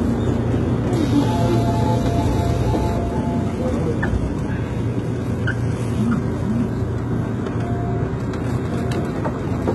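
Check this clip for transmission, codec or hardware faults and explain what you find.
There is one codec fault, present for the whole clip: HE-AAC compression. Heavy damage runs throughout, and the sound is likely to have passed through HE-AAC at a low bitrate that fits about 16 kbps. The codec carried only the lower spectrum and rebuilt the treble by copying lower bands upward under a coarse envelope, stopping at 11.8 kHz. That synthetic top end sounds gritty and metallic. Unlike a plain low-pass, the treble stays bright, but its detail doesn't line up with what sits below it.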